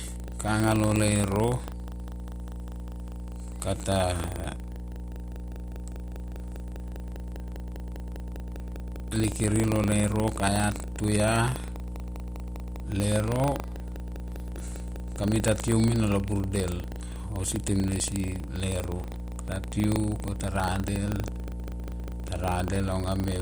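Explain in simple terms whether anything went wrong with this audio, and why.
A steady low hum sits under the speech for the whole clip, fairly loud and not far beneath the talking. This is mains hum at 60 Hz: electricity from the power line leaks into the recording, through a ground loop or a nearby transformer.

There is also a robotic buzz, like a rattle repeating about 25 times per second, heard throughout but only while someone is speaking. This is buffer tearing. The software filling the audio buffer and the hardware playing it have drifted out of step. A small slice of each buffer plays sound from roughly a tenth of a second earlier, with abrupt joins on both sides. The 25-per-second rate points to a buffer of about 40 ms.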